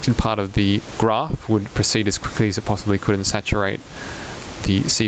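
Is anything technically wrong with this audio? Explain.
Yes. Throughout the clip there is gain pumping, likely from input gain set far too high with a fast limiter or compressor clamping down on each loud sound. The level swings by roughly 20 dB, leaving the sound squashed. The call path's Opus coding and the band limit near 8 kHz are audible as ordinary call character.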